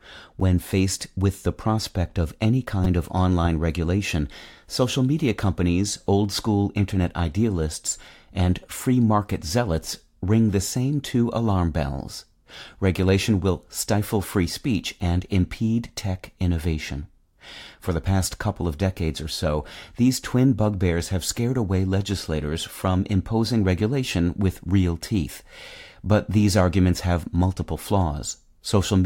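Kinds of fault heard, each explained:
Repeated buffer: At 2.84 s, between "the prospect of any" and "of online regulation social", the playback device ran out of fresh audio and replayed its last block of speech. That block lasts about 5.33 ms, which fits a 256-sample buffer. It sounds four times in a row, with a hard join at each repeat. Because the piece is so short, the result is a brief buzzy click rather than a clear stutter. Almost no speech is lost.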